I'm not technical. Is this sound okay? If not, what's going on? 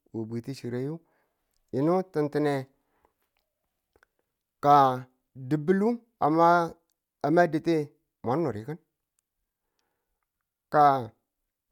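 Yes, nothing stood out as wrong when listening to this speech recording.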